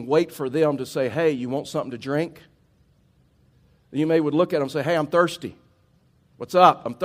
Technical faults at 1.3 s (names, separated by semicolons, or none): none